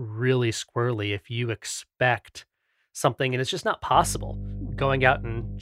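Mains hum enters at 3.92 s and runs to the end: a ground loop or nearby transformer couples the 50 Hz supply in, leaving a steady low drone roughly 10 dB under the speech.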